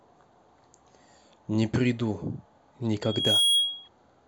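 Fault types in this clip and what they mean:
Loudspeaker feedback squeal: the microphone re-amplifies its own loudspeaker output, and at 3.3 kHz the loop gain exceeds one, so a pure tone swells within about 0.4 s to a few dB above the speech, from 3.02 to 3.89 s, showing as a bright horizontal spectrogram line with a ballooning waveform envelope.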